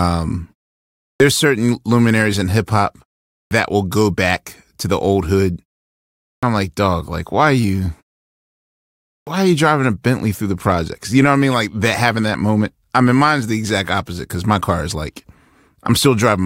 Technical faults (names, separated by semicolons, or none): clipped start after a pause